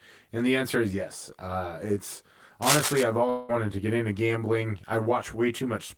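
Throughout the speech, one channel lags the other by roughly 20 ms, and the mono sum has channel delay (comb filtering). Notches start near 30 Hz, giving a rough, slightly doubled sound.

From 2.62 to 3.03 s, cable scratch noise adds rough, uneven rustling about as loud as the speech. This is likely from a worn connector or cable being moved.

From 3.29 to 3.51 s, a long network dropout likely cut off about 0.2 s of audio. The gap is filled with a fading buzz or hiss, and the audio then resumes further on.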